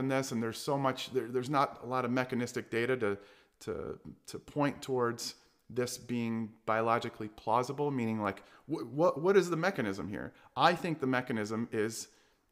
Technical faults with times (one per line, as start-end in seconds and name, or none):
none